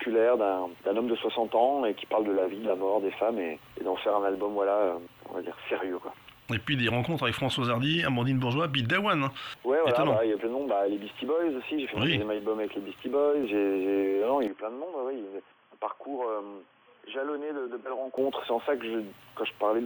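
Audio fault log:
14.48–18.18 s, input switched to a poorer device: the sound abruptly narrows, with nothing above 3.4 kHz, drops roughly 10 dB in level and gains a faint new noise floor, then clears again. The likely cause is capture moving to a lower-grade microphone or headset path.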